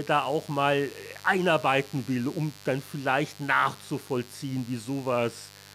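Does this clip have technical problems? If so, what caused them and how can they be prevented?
Yes. A mains buzz runs under the speech for the whole clip. It is steady and raspy, sitting roughly 20 dB below the speech. Its base is 50 Hz mains. Sharp switching spikes from a dimmer, a rectifier or an unshielded cable enter the signal path twice per mains cycle. Those spikes carry harmonics of 50 Hz up to several kHz, which gives the buzz its edge. To prevent it, use shielded, balanced cabling and keep the recording chain away from dimmers and switching supplies.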